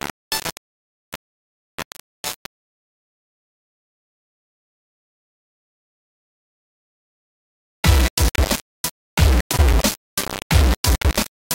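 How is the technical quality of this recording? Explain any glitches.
The technical quality is poor, with one fault running through the whole recording. Throughout, the most likely cause is low bit depth without dither: the audio appears rounded to very few levels, which fits roughly 3 bits. Because the error tracks the signal, quiet sounds turn grainy, and dense passages take on a near-steady hiss, with noise only about 10 dB below the sound.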